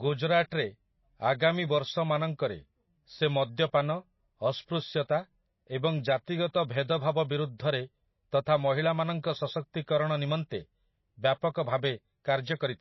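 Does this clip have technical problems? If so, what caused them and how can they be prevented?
Yes. Throughout the speech, an MP3 encoder was likely starved of bits, with the damage suggesting about 24 kbps. It discarded everything above 5.8 kHz and zeroed weak frequency lines that flicker from frame to frame, leaving a dull, watery, swirling sound with smeared attacks. Encoding at a higher bitrate, such as 128 kbps or more, would prevent this.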